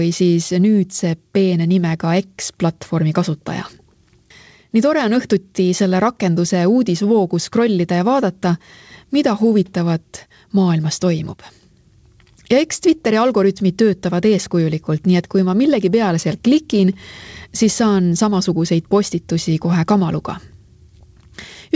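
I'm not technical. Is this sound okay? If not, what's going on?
Yes, it sounds fine: nothing stood out while listening, and the slightly muffled top end is simply how a normal internet call connection carries sound.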